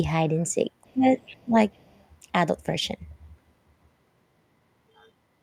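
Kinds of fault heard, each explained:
Speech suppressed in double talk: the speech dips sharply, by up to about 20 dB, in two brief gaps at 0.93–1.06 s and 1.44–1.55 s, likely because the echo canceller could not separate this talker from far-side echo and attenuated both.
Other side's voice leaking through: a faint second voice sits beneath the speech from 1.18 to 1.43 s, about 25 dB down, and more faintly from 1.74 to 2.04 s, likely loudspeaker playback the echo canceller left in the microphone signal.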